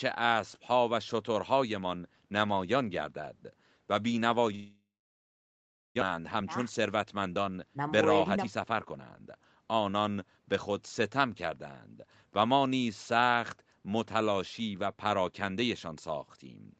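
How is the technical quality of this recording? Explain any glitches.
The recording has two connected glitches: a gap, then a hurried stretch while the stream catches up.

From 4.55 to 6.03 s there is a long network dropout, most likely from missing packets. The last sound fades into a brief buzz or hiss before about a second of silence. On a spectrogram it looks like a smeared tail, then an empty band. About a second of audio is never heard.

From 6.11 to 9.36 s a jitter buffer speed-up trims pitch-period slices to shed about 400 ms of backlog. The sound runs about 12% fast at unchanged pitch. The waveform keeps its cycle length, and the spectrogram shows compressed timing.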